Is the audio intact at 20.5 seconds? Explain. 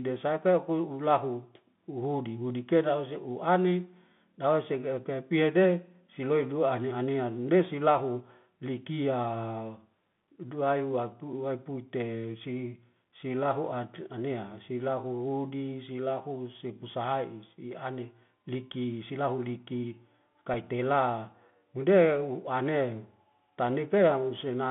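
No. At 20.54 s there's a single Bluetooth headset packet repeat: one lost packet, about 3.8 ms, gets replaced by the previous packet's bits decoded again, leaving just a small tick. Underneath, the Bluetooth CVSD headset codec runs the whole time, squeezing the speech into roughly 150 Hz to 3.6 kHz, with scratchy sibilants and a granular hiss.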